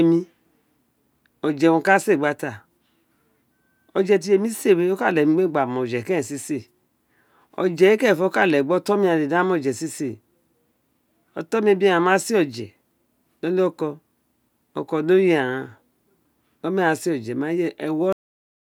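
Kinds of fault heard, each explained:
Cut-off end: the final stretch of audio was never written out, so the speech stops abruptly mid-sound at 18.13 s. On the waveform the signal ends while still sounding and falls straight to a flat line for the remaining 0.6 s, with no decay; the spectrogram shows energy ending in a clean vertical edge.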